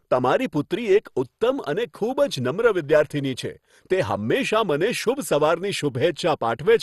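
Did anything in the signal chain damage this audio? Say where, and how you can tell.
Yes, at the codec stage. The speech sounds dull throughout, with nothing above 12.2 kHz and a gurgling, granular texture as upper bands flicker. This is likely MP2 compression at a rate near 64 kbps. A simple low-pass filter would remove the top without that flickering.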